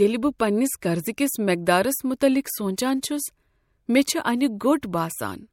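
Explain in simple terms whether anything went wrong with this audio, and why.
The compression step went wrong in a way called pre-echo. The codec chops the speech into blocks of roughly 26 ms and never switches to shorter blocks for sudden sounds, so its background noise, sized for each sharp attack, spills into the quiet moment just before it. You hear a brief hiss, lasting about 11 to 17 ms, right before the attack, which then sounds softened. This happens at 0.39 s (just before "پننس قرضکس"), 0.81 s, 3.01 s, 4.59 s and 4.82 s.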